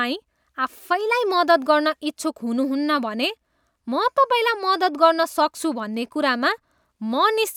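Nothing in the speech stood out as a technical fault on listening.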